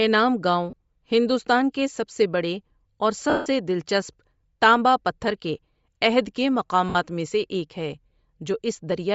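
A low-bitrate Bluetooth link, likely LC3 compression as used in LE Audio, is thinning out this speech recording throughout. Its upper spectrum is filled with noise, giving a plainly audible breathy, grainy edge consistent with a rate near 32 kbps. Lost LE Audio frames also cause three dropouts: about 30 ms at 0.70 s, 60 ms from 6.89 to 6.96 s, and a longer 160 ms gap from 3.30 to 3.46 s. During each gap, the decoder repeats the last spectrum with scrambled phase, so the sound turns into a noisy smear, and in the longest gap it fades toward silence.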